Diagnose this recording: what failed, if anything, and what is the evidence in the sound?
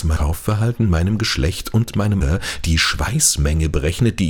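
The failure is in the codec stage, from damaged data in a compressed stream. Two brief glitches stand out, at 0.16 s and 2.21 s. Each is a short, unnatural blip that breaks the sound for an instant. The compressed bytes at those points were corrupted. The decoder could not read those frames correctly, so it produced garbage or dropped them, lost sync, and then locked onto the next valid frame header.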